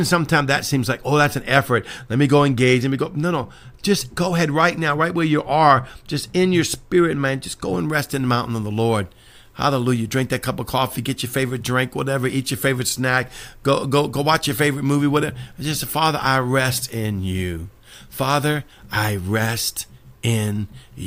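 Speech, with pre-emphasis left on from 7.80 s to the end. The treble boost of a CD-style 50/15 µs curve was applied but never undone by de-emphasis, leaving 10 kHz about 8 dB hot relative to 1 kHz, so the sound turns thin, bright and sibilant.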